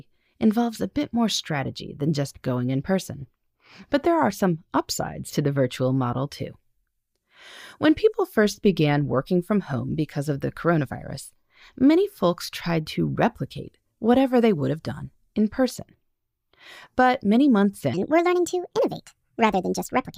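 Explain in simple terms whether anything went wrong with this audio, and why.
A section at the wrong speed runs from 17.94 s to the end of the clip at 20.18 s, right after "many months". From there the speech suddenly plays about 1.41 times too fast, so the voice turns hurried and jumps up in pitch by roughly seven semitones, a bit over half an octave. Speed and pitch rise together, which likely means this stretch was played back or edited against the wrong clock.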